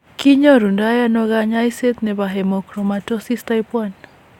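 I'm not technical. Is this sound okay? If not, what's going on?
Yes, it sounds okay.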